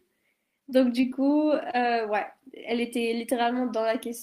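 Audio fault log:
1.01 to 1.05 s, short concealed packet loss: a brief smear with a wobble, where the sound loses its crispness for an instant and then settles back. About 20 ms of audio never arrived in time, which fits a single lost packet. The receiver covered the hole with about 15 ms of sound extrapolated from what came just before, then crossfaded into the real signal, leaving a short blurred patch.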